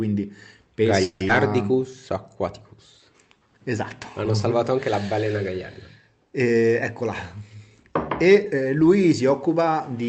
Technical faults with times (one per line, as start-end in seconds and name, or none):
1.03-1.22 call audio freeze
1.28-1.31 skip ahead
3.10-3.59 jitter buffer slow-down
7.01-9.66 jitter buffer speed-up